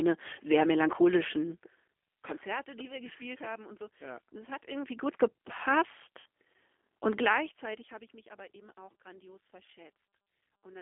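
Speech, carried throughout by a G.729 codec: the line band runs from 250 Hz to 3.5 kHz, and the rough, synthetic codec damage fits 8 kbit/s G.729A. Zipper noise rides on the sound from 4.48 to 5.16 s as the level moves about 20 dB in unsmoothed 2 dB steps, roughly fifteen per second, each step ticking. At 6.20 to 6.26 s, about 60 ms of audio was lost in VoIP packet loss concealed by the speech codec, which fits three lost packets; the decoder extrapolates a fading buzzy tone or coloured noise in place of the missing speech.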